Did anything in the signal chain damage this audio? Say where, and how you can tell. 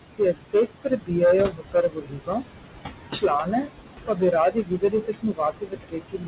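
Yes. Hard clipping at a converter or sample-format stage: peaks overdriven by about 10 dB hit the converter's limit, so a small share of samples are cut flat, giving harsh fuzz on loud speech.

Noise suppressor artifacts in call processing: the suppressor pulls steady noise down by about 20 dB frame by frame, so the room noise pumps between phrases.

Speech cut by the noise suppressor: it misread speech as noise at 0.02–1.12, 1.5–2.47, 3.11–3.72, 4.06–4.32 and 4.51 s to the end, dropping it by up to about 21 dB, so syllables sound swallowed.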